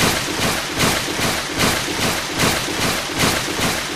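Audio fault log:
No fault to log for this audio.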